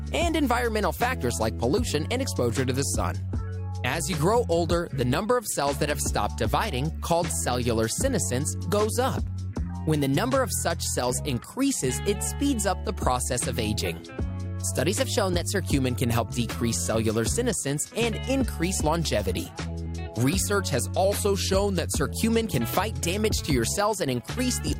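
From 9.64 to 10.49 s and 14.89 to 15.60 s the sound runs 6.26% fast, about 105 cents sharp. From 21.04 to 21.88 s it runs 6.26% slow, about 112 cents flat. Each jump is abrupt, unlike gradual wow, likely a drift correction step.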